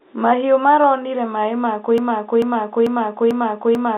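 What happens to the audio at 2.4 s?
The sound sticks in place: a 0.44 s fragment repeats exactly, back to back, five times, from 1.98 s, right after "maronire maĩ ma", until the clip ends. This broken-record loop likely comes from a stalled stream resending its last fragment, so the intended audio is lost.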